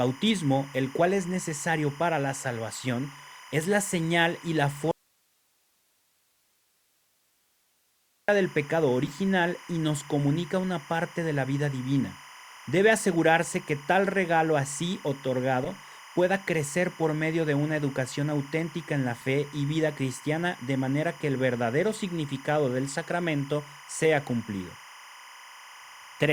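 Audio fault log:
Throughout: timecode bleed. A steady chirping warble sits behind the speech, about 20 dB below it. Linear timecode at 25 frames per second has leaked in from a neighbouring line. Its square wave flips between tones near 1 kHz and 2 kHz.
4.91 to 8.28 s: audio dropout to a faint residue. After "la señal y la", the speech cuts off abruptly for 3.37 s and returns at "del pecado". Only hiss remains, about 45 dB down. The likely cause is a lost signal feeding a path that stayed live.
9.05 to 9.13 s, 15.65 to 15.67 s and 19.21 to 19.24 s: corrupt frame decoded. Short squeaks and noise blips break through. The first comes right after "del pecado" and lasts long enough to suggest several damaged frames. The second comes just before "pueda crecer por medio". Flipped bits made the decoder put energy at the wrong frequencies.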